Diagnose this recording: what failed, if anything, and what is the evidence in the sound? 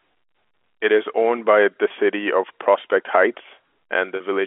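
Network packet loss with pitch repetition: about 20 ms lost at 1.88–1.90 s, after "is owned by the", and 40 ms at 4.16–4.20 s. The receiver looped the last pitch period, so each gap sounds like a brief held, buzzy tone.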